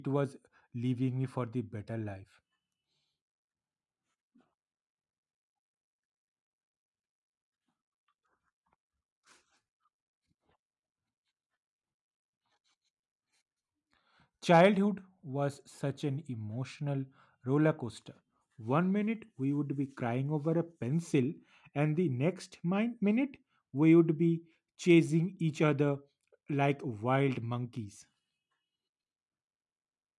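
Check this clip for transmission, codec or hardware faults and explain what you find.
I found no faults in this clip.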